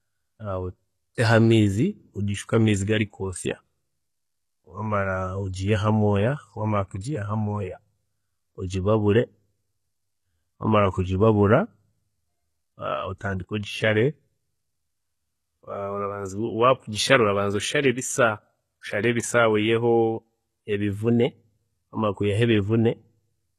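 Throughout the speech, the treble is bright but synthetic, s sounds turn gritty and lispy, and nothing reaches above 12.3 kHz. This points to HE-AAC compression, likely at a bitrate around 16 kbps. Its rebuilt highs don't line up with the lower harmonics, unlike a plain low-pass that simply dulls the sound.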